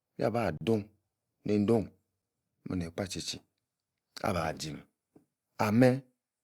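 A block of digital silence cuts the speech from 0.57 to 0.61 s, a hole of about 36 ms, and a second, much shorter one hits at 4.27 s, lasting about 7 ms. In each case the sound cuts out and returns with no fade, which points to an output buffer not being filled in time. The longer gap sounds like a brief dropout and the shorter like a single tick.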